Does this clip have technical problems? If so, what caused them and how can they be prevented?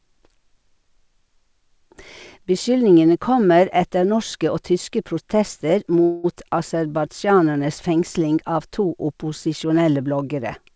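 Yes. A call audio freeze runs from 6.04 to 6.26 s, just after "tyske protester". The receiver stretches the last sound for about 0.2 s. Nothing is lost, but the speech arrives later. The likely cause is delayed packets emptying the jitter buffer. A steadier network path or a deeper adaptive jitter buffer would prevent it.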